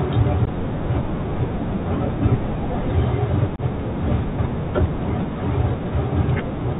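The speech passes through a Bluetooth CVSD headset codec from start to finish, a one-bit-per-sample delta coder whose adapting step cannot keep pace with loud high sounds, which fits a 64 kbps link. Everything above 4 kHz is gone, sibilants turn scratchy, and a granular hiss sits beneath the speech.

Unconcealed Bluetooth headset packet loss then strikes twice. From 0.45 to 0.48 s a couple of packets vanish, about 15 ms of audio. From 3.56 to 3.60 s a few more go, about 22.5 ms. Each is filled with silence or an idle pattern, leaving a short hole with abrupt edges, and the speech returns briefly quieter afterwards.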